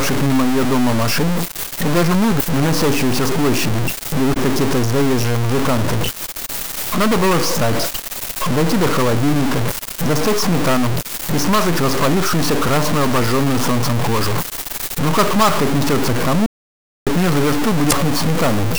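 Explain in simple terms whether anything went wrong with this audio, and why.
Yes, three separate problems can be heard.

Throughout the clip there is a noisy roughness riding on the sound, and the quiet stretches are not clean but filled with a gritty hiss. That points to a stuck bit, likely one line in the converter or its wiring holding a single binary digit fixed. Ordinary background hiss stays even and smooth, while this noise is coarse and follows the shape of the sound itself.

Three brief blips, each lasting a few hundredths of a second, come at 2.37 to 2.41 s, 4.33 to 4.37 s and 17.88 to 17.93 s. These are damaged data in a compressed stream: a patch of the file was corrupted, so the player briefly misread it and then picked up again a moment later.

From 16.46 to 17.07 s, about 0.6 s, the sound cuts out completely. This is an audio dropout to silence: the input was cut off, most plausibly by a lost connection, while recording carried on writing nothing. 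A quiet moment in the original would still carry faint room sound, but this gap is dead silent, and whatever happened during it is gone for good.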